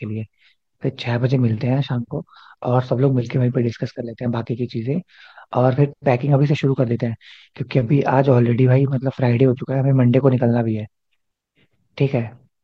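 No technical faults can be heard anywhere in the speech recording.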